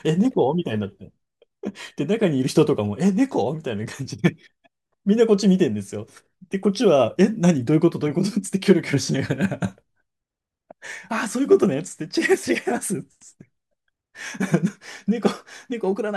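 No technical faults are audible anywhere in the recording.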